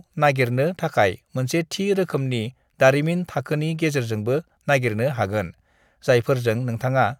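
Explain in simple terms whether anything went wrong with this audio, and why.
Nothing went wrong here: the speech recording holds steady throughout, with no technical problems to be heard anywhere in it.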